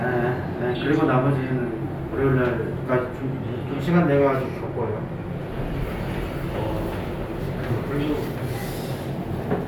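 No technical faults can be heard in this recording.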